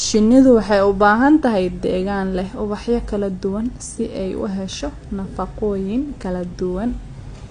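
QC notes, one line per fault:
Throughout: AAC compression, likely AAC-LC at a low bitrate, around 32 kbps. Nothing reaches above 9.8 kHz, so the speech sounds dull, and the coarsely quantised frames leave plainly audible smearing, with a warbling, fizzy texture on sibilants and sustained sounds.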